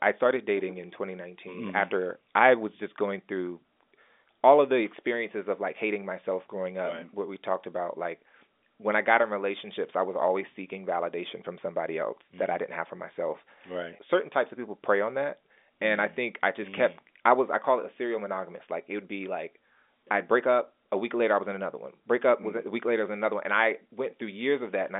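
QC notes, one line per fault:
Nothing to log here, since the audio just has the narrow sound of an ordinary telephone line, with nothing above about 3.7 kHz coming through, and there's no fault to note.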